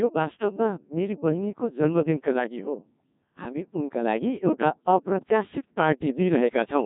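From start to finish the speech has been through a Codec 2 vocoder, and the damage is heavy. Rather than keeping the waveform, the codec sent only pitch, voicing, energy and a rough spectral envelope, and the decoder rebuilt the voice from sine waves. The result is robotic and buzzy, with a thin, synthetic edge and nothing above 3.8 kHz. The coarseness points to a Codec 2 mode of around 1.6 kbit/s.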